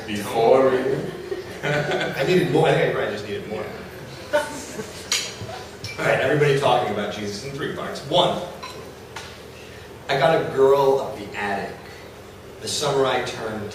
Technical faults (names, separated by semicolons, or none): none